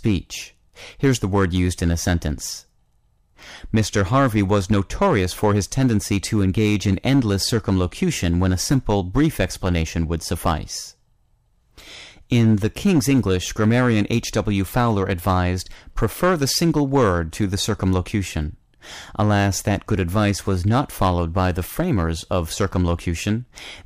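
Speech, and it's hard clipping all the way through. The level going in was pushed about 7 dB past what the stage could pass, so whenever the voice peaks, the waveform tops get sliced flat. Only a small share of samples, something like one or two percent, actually hit the ceiling, but those flattened peaks throw off high harmonics, so you get a gritty crackle riding on the louder syllables throughout the whole clip.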